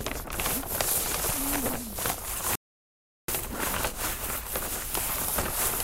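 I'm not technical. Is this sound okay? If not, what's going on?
No. At 2.55 seconds the audio goes silent, then resumes at 3.28 where it stopped. That's a rebuffering stall: playback waited for data, adding 0.73 seconds.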